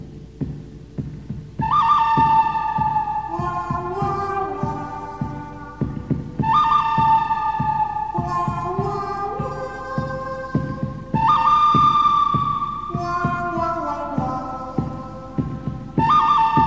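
Nothing stood out on listening to this audio.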